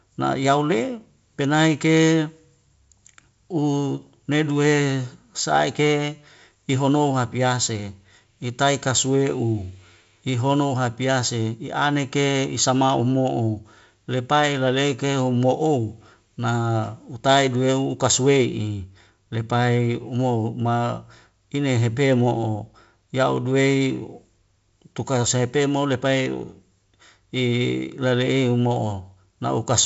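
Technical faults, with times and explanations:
No technical faults can be heard in this speech.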